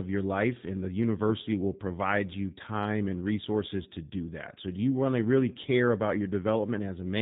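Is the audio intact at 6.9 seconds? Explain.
No. At 6.9 s, as throughout the clip, the speech carries G.729 codec damage: a pulse-based vocal model leaves it rough and synthetic, not merely dull like a 4 kHz low-pass, fitting an 8 kbit/s stream.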